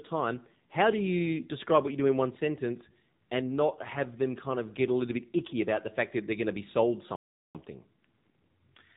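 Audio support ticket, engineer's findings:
AMR narrowband mobile codec throughout: buzzy, synthetic speech, spectrogram bare above 4 kHz. Sound fits AMR-NB at 7.4 kbps, with low-bit pulse excitation of a vocal-tract model.

Playback stall at 7.16–7.55 s: output drops to silence for about 388 ms, flat line in waveform, blank spectrogram column. Likely buffer underrun or blocked playback thread.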